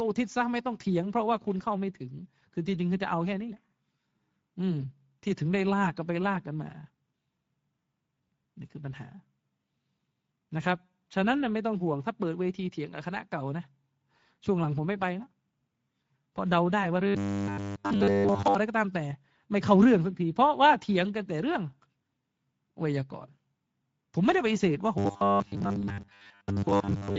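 Throughout, the Speex codec starves the excitation of bits, consistent with a mid setting near 17 kbps. The speech is plainly noisy and hoarse, with thin, hissy upper frequencies.

From 17.07 to 18.55 s, audio likely arrived too seldom, so nearly all of it is replaced by a repeated 10 ms buffer. This produces robotic sound from repeated short buffers, a rigid metallic 100 Hz buzz.

From 24.98 s to the end, the same likely buffer starvation returns, with most of the audio repeated. The robotic 100 Hz buzz roughly tracks the speech.

Within that stretch, at 25.81 to 25.84 s, a gap consistent with one lost 20 ms frame is bridged by VoIP packet loss concealed by the speech codec. The decoder extrapolates a brief, fading stretch of sound from its last pitch and filter.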